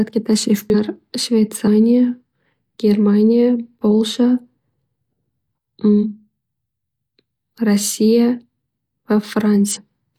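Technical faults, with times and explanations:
0.70–0.75 s, 1.63–1.68 s, 5.99–6.06 s and 9.71–9.77 s: damaged data in a compressed stream. Corrupted frames make the decoder lose sync and hunt for the next header, giving brief chirps, squawks, clicks or short holes in the speech.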